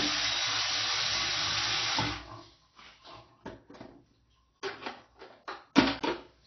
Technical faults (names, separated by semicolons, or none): AAC compression